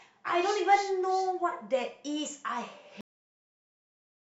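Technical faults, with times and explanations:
3.01 s, cut-off end: the speech stops abruptly in the middle of a sound at 3.01 s and drops straight to digital silence, which holds until the end of the clip at about 4.2 s. There is no natural decay or tail. The final portion of the audio was never written or played out, so the playback buffers covering that stretch are simply missing. The waveform ends mid-cycle rather than fading, which produces the hard, truncated stop.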